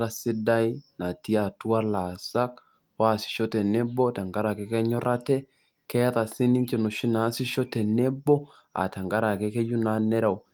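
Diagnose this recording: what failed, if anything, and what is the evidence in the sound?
No audible faults detected.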